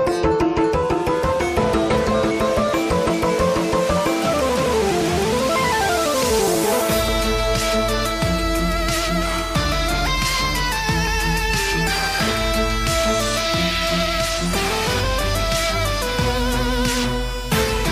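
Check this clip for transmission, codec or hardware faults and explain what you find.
One transmission fault can be heard: a single overlap between stream segments at 11.07 s. Two delivered segments, apparently 4-second chunks, carried timestamps that overlapped, so the player discarded the shared stretch as if it had been sent twice, though it had not. About 5 ms of audio disappears and the two sides are butted together. It sounds like a brief click or tiny skip. On a waveform the trace jumps abruptly at that instant, and a spectrogram shows a thin vertical broadband line.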